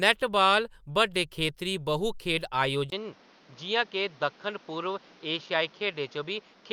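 At 2.9 s, after "बड्डे खेतरी बहु खेढ", a 20 ms gap gives way to duller speech with nothing above 6.7 kHz and new background noise about 30 dB below the speech, likely from an input switched to a poorer device.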